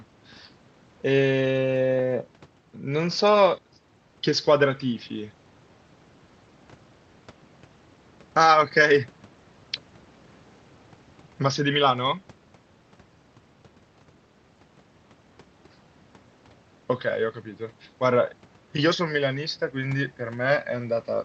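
Nothing in this speech recording stood out as a technical problem on listening, beyond what is expected from a call path using the Opus codec.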